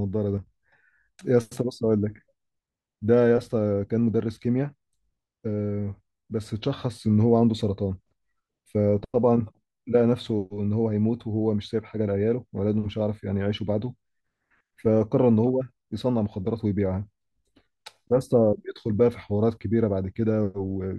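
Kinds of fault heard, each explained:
One channel drops out: the speech suddenly dips by about 6 dB from 0.38 to 0.47 s, likely because one stereo side vanished briefly before the mono sum.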